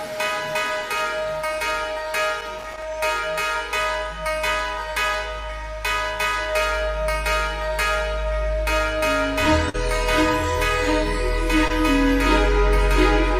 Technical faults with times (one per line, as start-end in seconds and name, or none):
2.39-2.82 loose connector crackle
9.69-9.76 short concealed packet loss
11.68-11.71 short concealed packet loss